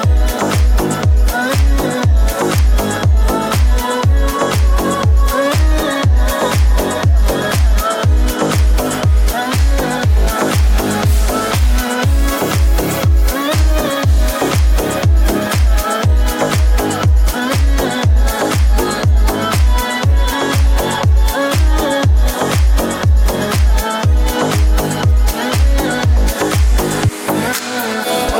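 Hard clipping runs through the whole clip. The signal arrives about 1 dB hotter than the stage ahead of it can pass, so only the highest peaks are sliced flat, well under one percent of the samples. Each flattened peak adds harmonics high in the spectrum. With so little overload, the result is a brief crackle or edge on the loudest moments, not a continuous fuzz over all loud material.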